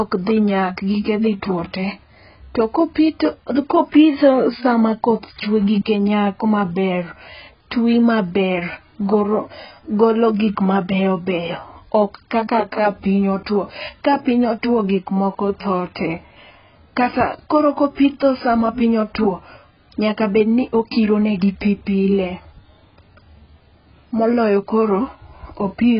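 From start to finish the speech sounds dull and smeared, with nothing at all above 5.4 kHz, so sibilants lose their edge and the whole recording has a muffled, heavily processed quality. This is likely AAC compression, with AAC-LC run at a very low rate, consistent with about 12 kbps, where the encoder throws away high frequencies and coarsely quantises what remains. On a spectrogram the energy stops at a hard, flat ceiling near 5.4 kHz.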